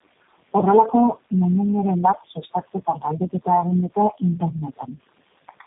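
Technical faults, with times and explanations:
Throughout, tandem speech coding: rough, muffled, warbly speech with nothing above 3.8 kHz, which fits about four low-rate codecs in a row, each re-coding the last one's damage.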